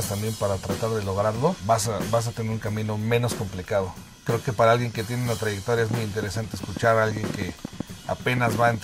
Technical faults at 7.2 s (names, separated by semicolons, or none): train of clicks